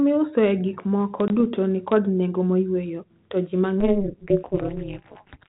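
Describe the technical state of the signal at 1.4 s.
Packet loss on an ADPCM call: about one packet, 20 ms of audio, was lost and filled with silence, knocking the decoder's predictor and step size out of step. Between 1.28 and 1.41 s, after "miusoe gikmoko", a hard-edged gap appears, and "nikod nengo moyweyo to" returns briefly slightly distorted before settling.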